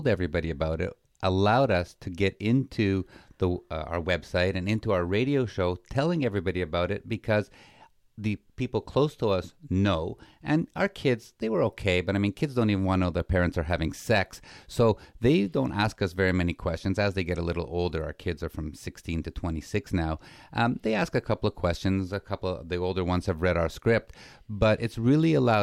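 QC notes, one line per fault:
No faults detected in this speech recording.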